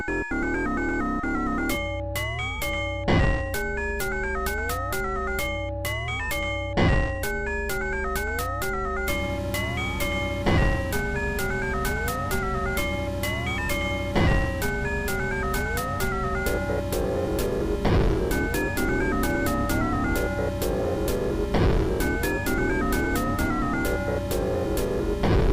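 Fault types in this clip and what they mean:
DAB burbling: bit errors slip past error correction, making sub-bands jump for up to a frame; heard at 1.23 and 20.80 s as short blips of noise, showing as blotchy band-limited bursts on a spectrogram.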